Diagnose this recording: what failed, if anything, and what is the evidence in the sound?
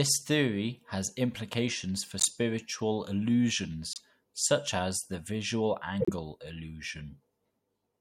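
Broken MP3 bit reservoir at the codec stage, at 2.18–2.26 s after "theory has implications for", 3.93–4.00 s before "such as the visual", and 6.00–6.09 s after "such as the visual". At each point the speech skips ahead with a chirp, noise burst or short hole lasting roughly three 26.1 ms frames. Likely cause: frames went missing, so the frames that followed looked back into the reservoir and decoded another frame's bytes.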